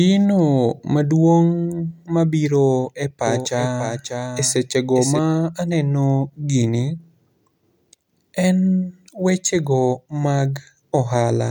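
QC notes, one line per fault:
3.27–5.19 s, doubled audio track: likely a slower second capture path mixed in; a dry copy about 5 dB quieter trails roughly half a second behind.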